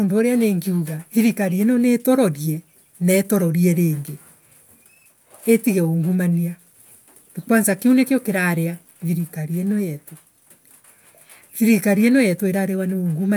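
No technical faults detected.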